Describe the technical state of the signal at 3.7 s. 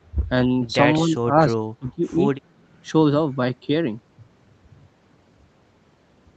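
At 3.7 s the speech is intact, with no fault; there is the normal call-path band limit, which leaves nothing above about 8 kHz.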